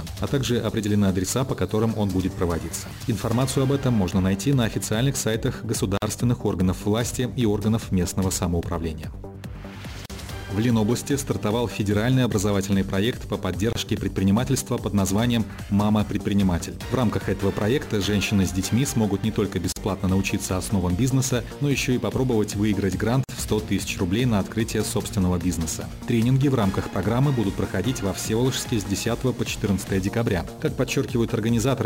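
Sample clock jitter runs through the whole clip. The converter's sampling instants wander by something on the order of 10 microseconds, so each sample lands slightly off its ideal moment. The resulting amplitude error scales with how steeply the waveform is changing. It sits roughly 25 dB below the signal, heard as a grainy hiss riding on the sound. It thickens on loud, bright passages and drops away when the sound goes quiet.

Gaps at joins of encoded pieces appear five times: at 5.97 s (about 48 ms), 10.06 s (40 ms), 13.73 s (28 ms), 19.72 s (41 ms) and 23.24 s (49 ms). The audio was evidently encoded in segments and spliced without removing each run's leading encoder delay or trailing frame padding. Each join leaves a brief dropout with smeared edges, after which the sound resumes exactly where it left off.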